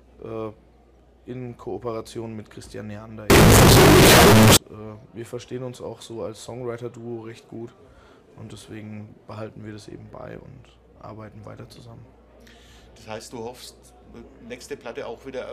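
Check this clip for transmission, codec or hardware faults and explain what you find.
One fault shows up, from 3.30 to 4.57 s: the signed and unsigned mixed up error. For those 1.27 s the samples were likely read with the wrong sign convention, which fits 16-bit data whose top bit is being flipped. Every small swing around zero then lands at the opposite extreme of the range, so the waveform leaps from full positive to full negative at each crossing. The result is a burst of extremely loud, harsh distortion, with quiet moments blasting as hard as loud ones.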